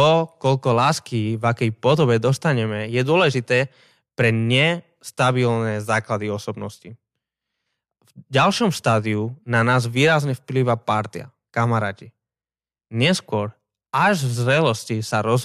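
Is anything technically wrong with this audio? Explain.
No, nothing technically wrong can be heard here.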